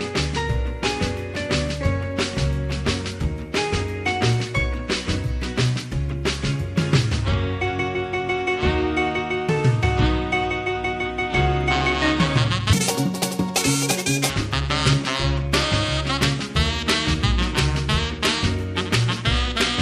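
The audio plays normally until 12.73 s, when it is read two samples at a time and runs at double speed until 14.30 s. For that 1.57 s stretch, everything moves twice as fast and sits a full octave (12 semitones) higher. The reader treats each pair of samples as a single frame, as if the stream had two channels or wider samples, so alternate samples are effectively discarded.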